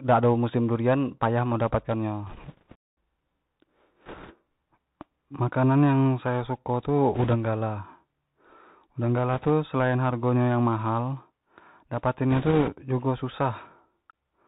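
Throughout, the speech carries Bluetooth CVSD headset codec damage, consistent with a 64 kbps link. Its one-bit delta modulation removes everything above 4 kHz, slope overload roughens loud high-frequency passages, s sounds turn scratchy, and a granular hiss sits under the speech.

Bit errors on the Bluetooth voice link appear at 2.27–2.76 s, 4.05–4.34 s, 7.14–7.34 s, 9.33–9.50 s and 12.31–12.69 s. Because each CVSD bit moves the signal only one small step, errors at a few percent produce a brief crackly rushing noise, not clicks.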